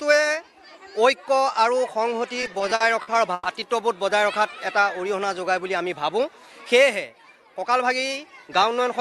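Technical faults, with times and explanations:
2.41–3.47 s, repeated stalls (stutter): the jitter buffer ran dry nine times, and each time the receiver stretched the last sound, 280 ms in all, the longest gap 120 ms. The sound drags and stutters. Spectrograms show smeared, repeated frames; the waveform shows fading, repeated cycles.
4.80–5.44 s, jitter buffer slow-down: to rebuild its reserve, the receiver repeated single pitch periods, adding 65 ms and running at 91% speed with unchanged pitch. Sounds feel drawn out. Harmonics stay level on a spectrogram while features lengthen; the waveform shows near-identical repeated cycles.
7.40–8.70 s, jitter buffer speed-up: with surplus audio queued, the receiver removed short pitch-period pieces, roughly a tenth of a second in total, running at 108% speed at the same pitch, so the sound feels hurried. Spectrogram features appear compressed in time, and the waveform shows subtle splice points.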